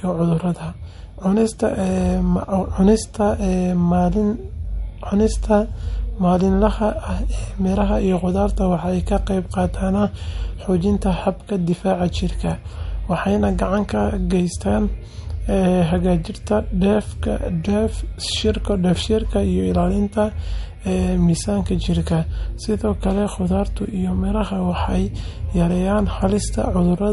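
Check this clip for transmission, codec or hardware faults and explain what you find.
There is one fault, present for the whole clip: MP3 compression is the likely cause of plainly audible codec damage to the speech. Above 11.2 kHz there is nothing at all, because the encoder discarded the top band to save bits, which fits a low bitrate of around 48 kbps. Weak frequency lines dropping in and out between frames give a watery, swirly quality. On a spectrogram this shows as a flat ceiling at 11.2 kHz with speckled gaps just beneath it.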